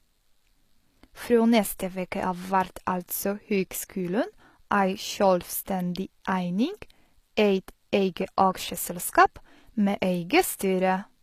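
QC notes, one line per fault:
Throughout: HE-AAC compression. The treble sounds bright yet synthetic, with sibilants turning gritty and metallic because the upper band is rebuilt from copied lower bands rather than coded, so its harmonics fail to line up with those below. The damage is plainly audible, which fits a low rate around 24 kbps, likely from this codec. A spectrogram shows blocky, repeated texture in the replicated treble and nothing at all above 14.9 kHz.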